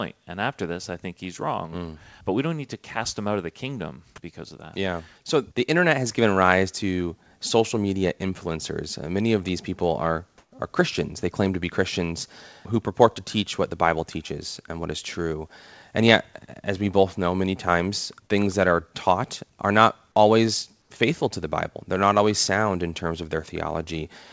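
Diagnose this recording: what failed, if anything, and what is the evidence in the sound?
Microphone volume stepped up, at the call-processing stage: at 6.06 s, between "the internet" and "given rise to social", the sound and its background both rise by about 4 dB at once. This is automatic gain control raising the device input. The waveform envelope shows a clean step.

Comfort noise in place of the background: from 10.38 to 10.52 s, after "of these people are", the background turns into steady, featureless hiss about 7 dB louder. From 20.82 to 20.90 s, between "taught are not always" and "faithful to the", it is about 3 dB quieter. The likely cause is discontinuous transmission with synthetic fill. On a spectrogram the background texture, about 45 dB below the loudest parts, becomes a smooth, uniform band. The G.722-style band limit, with nothing above 8 kHz, stays the same throughout.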